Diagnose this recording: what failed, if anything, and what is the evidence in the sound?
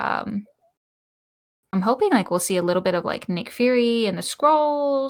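Nothing stood out on listening to this speech recording, and no stage of the chain gives audible evidence of a failure.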